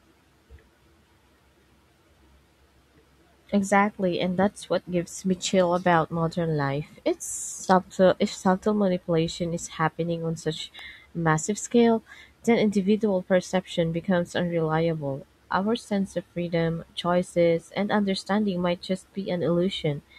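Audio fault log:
10.79 s, electrical switching spike: a sharp snap, about 2 ms long and fairly quiet at about -30 dBFS, lands between "is happening on such" and "massive scale then individual", likely an arc from a nearby switch or static discharge coupling into the audio line.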